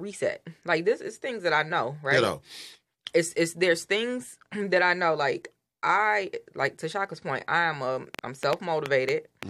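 Right after "point I am a", at 8.15 s, a train of clicks kicks in and runs to 9.44 s: about seven sharp, near-identical pops at roughly 4.7 per second, spaced unevenly, and they jump out well above the speech, something like 15 dB hotter. It sounds like erratic ticking laid over the talking and the gaps alike. That repeated, same-shaped pulse points to something injecting spikes into the chain, likely electrical interference or a faulty connection or power supply.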